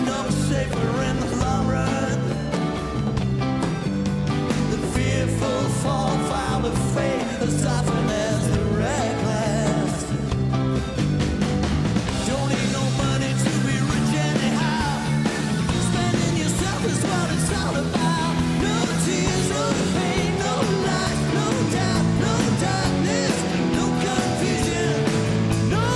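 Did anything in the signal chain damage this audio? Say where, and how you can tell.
No, nothing in the signal chain audibly damaged this.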